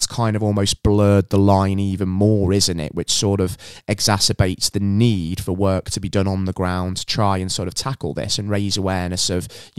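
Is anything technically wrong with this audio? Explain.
No, nothing is technically wrong with this audio.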